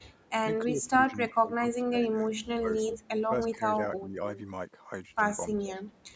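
At 0.0 to 0.04 s a faint echo leak appears. A copy of the speech returns about 300 ms late, roughly 35 dB below it. From 0.64 to 3.31 s the speech is suppressed in double talk. For about two seconds in total it dips, falling as far as about 25 dB. The likely cause is an echo canceller that could not tell the near talker from loudspeaker echo, so it turned both down while the far side spoke.

At 2.72 to 2.97 s the echo leak is strong. A copy delayed by 331 ms sits only about 10 dB under the speech. The likely cause is a canceller on a loudspeaker call that failed to remove its own pickup and sent it back.

Shorter suppressions follow at 3.52 to 3.62 s and 3.98 to 4.2 s. Each is about a 10 dB dip. At 4.36 to 4.41 s a brief echo scrap returns, 331 ms late and about 25 dB down. A last suppression at 5.54 to 5.92 s pulls the speech down by about 10 dB.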